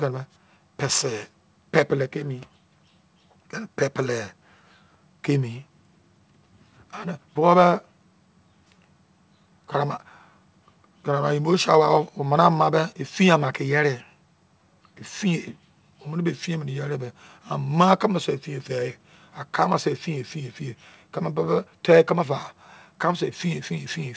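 The speech has passed through a call link whose wideband coding leaves nothing above 8 kHz, which fits G.722, and no technical fault can be heard anywhere in the audio.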